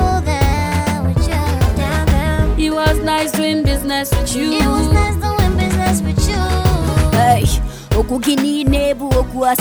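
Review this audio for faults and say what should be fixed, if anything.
A drift correction step occurs twice, from 0.53 to 1.80 s and from 8.15 to 9.15 s. In each, the sound runs about 6.25% fast and rises 105 cents, roughly a semitone, then snaps back. The cause is likely clock-matching software changing the playback rate in one jump to rebalance its buffer. On a spectrogram, every harmonic steps upward together for the span, and waveform features bunch slightly closer. Prevention: use gradual, fine-grained resampling for clock drift.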